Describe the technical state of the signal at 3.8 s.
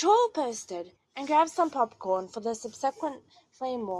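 At 3.8 s the speech carries a faint, fast rattle of clock slip clicks, tiny regular ticks roughly every 40 ms, part of a run of around a hundred that spans 0.14 s to 3.98 s. The likely cause is two devices running on unsynchronised clocks, differing by something like 700 ppm, so a single sample is dropped or repeated each time the drift adds up to a whole sample, leaving a small discontinuity at each slip.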